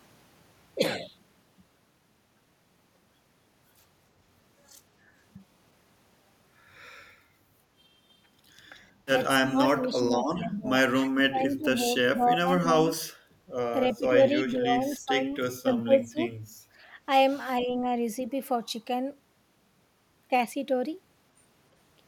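From 9.46 to 17.92 s the speech dips repeatedly: 9.46–10.7, 11.02–11.78, 12.09–12.94, 13.95–15.19, 15.52–16.61 and 17.6–17.92 s. Drops range from roughly 10 dB to as deep as 30 dB. This is likely speech suppressed in double talk. The canceller misread overlapping talk as echo.

At 13.22 to 13.36 s the background sound falls away for a moment, about 14 dB down. This is background gated by the echo canceller. It clamped the microphone while the loudspeaker played, then released it.

At 17.61 s a faint scrap of echo leak slips through, about 25 dB below the speech. It trails the original by 321 ms. One side's echo canceller likely left some of its loudspeaker pickup unremoved.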